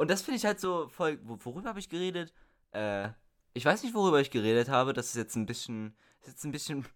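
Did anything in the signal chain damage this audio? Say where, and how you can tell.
Yes. The speech level drops abruptly by about 6 dB from 0.65 to 3.05 s, and again from 5.65 s to the end. This is likely one channel dropping out in the analogue wiring, which leaves the mono sum with half the shared signal. Unlike a fade, each step is instant and fixed.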